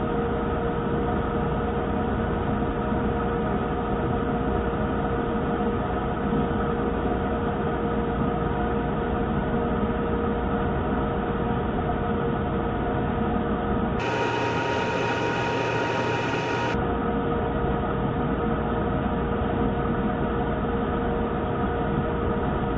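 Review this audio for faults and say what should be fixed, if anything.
From 14.00 to 16.74 s the sound suddenly races and jumps up a full octave, running at twice its normal speed with pitch raised 12 semitones, then drops back to normal. This is a wrong sample rate fault: the samples are played back at double the rate they were captured at, with no conversion, so timing and pitch shift together by the same factor of two. That ratio fits 8 kHz material played at 16 kHz. To prevent it, carry the true sample rate with the audio and resample to the output device's rate rather than passing samples through unchanged.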